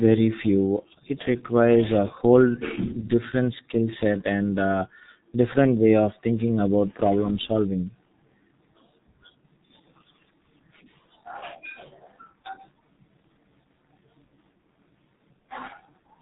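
From start to finish the speech carries heavy damage from the G.723.1 codec. This is an early internet-telephony coder. It works in 30 ms frames and squeezes the signal hard, which fits a rate of about 6.3 kbit/s. Nothing above 4 kHz survives, so the sound is muffled and boxy. The voice model updates slowly between frames. That leaves a hoarse, rough texture, and consonants smear together instead of landing crisply.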